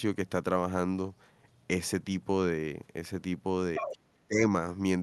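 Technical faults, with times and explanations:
3.75–3.98 s, other side's voice leaking through: A second voice breaks in briefly, only a little quieter than the talker. The far end was likely playing on a loudspeaker, and the echo canceller left part of it in the microphone signal.
3.78–4.47 s, speech suppressed in double talk: The talker's voice sinks sharply while that leaked voice overlaps, falling almost to silence at its deepest. About half a second is affected. Both sides were likely talking at once, so the canceller turned everything down.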